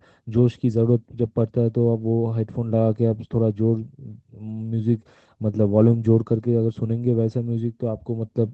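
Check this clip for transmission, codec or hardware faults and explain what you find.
No fault can be heard in the signal, which shows the ordinary character of an Opus call link, with its audio band ending at 8 kHz in a way that fits a bitrate of around 24 kbps.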